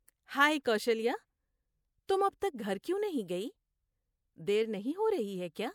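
A brief hiss smears the onsets at 2.07 s and 2.40 s, just before "تک گھر کیوں نہیں". This is pre-echo: block-coding noise, spread about 18 ms, leaks ahead of each sharp attack.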